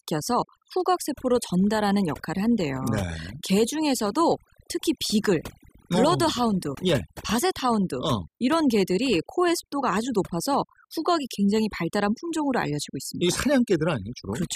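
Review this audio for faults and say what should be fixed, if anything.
The speech has overdone noise removal running the whole way through. Between phrases the background drops to near silence with little twinkling specks, because bands sitting close to the noise estimate got pulled right down, taking quiet voice detail along. Next time, back off the reduction amount and check the result on headphones before committing.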